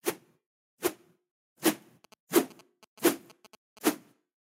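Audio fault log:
2.04 to 3.79 s, GSM signalling bursts: a nearby 2G phone exchanging short signalling bursts with its network is picked up and rectified by the audio circuit, giving a galloping dit-dit-dit of brief 217 Hz buzzes roughly 25 dB below the sound.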